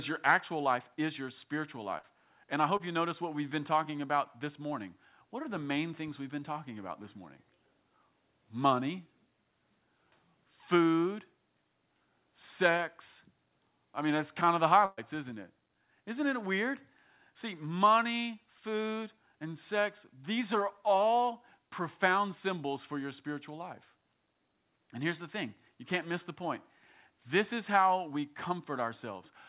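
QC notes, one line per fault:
1.98–2.05 s and 14.85–14.99 s, burst of packet loss: Consecutive packets were lost or arrived too late to play, so the receiver extended the last sound and faded it. The first comes right after "life is your spiritual," with about 53 ms filled and 60 ms lost. The second comes after "that's kind of the," with 120 ms filled, a 10 ms silence and 120 ms lost before "isn't it." Each sounds like a held, fading tail followed by a jump ahead.
2.77–2.81 s and 10.91–10.95 s, short concealed packet loss: About 20 ms of audio never reached the decoder in time, and the receiver filled it by continuing the preceding sound before blending back. The first falls just before "you notice what we've." Each is heard as a brief smear or wobble, set in the narrowband call sound, which carries nothing above 4 kHz, consistent with a G.711 call path.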